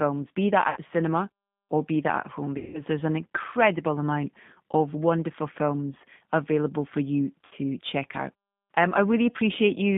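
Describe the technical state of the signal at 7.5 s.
Between 7.45 and 7.55 s the speech breaks into a short smeared buzzy tone or coloured noise that fades, and the voice comes back weak and distorted before it steadies. This is VoIP packet loss concealed by the speech codec. About 60 ms of audio never arrived, which fits three 20 ms packets. The decoder filled the gap by repeating its last pitch and vocal tract filter at falling gain. Because each frame builds on the one before, the damage lasts past the gap itself.

Throughout, and so at this moment too, the speech sounds rough and slightly synthetic, with plainly audible coding damage, and the band is held to about 150 Hz to 3.6 kHz. That is the G.729 codec, here the G.729A variant, and the sound fits its 8 kbit/s rate. It rebuilds speech from a vocal tract filter, a pitch predictor and a few pulses per frame, so it cannot reproduce fine detail or anything above the narrowband limit.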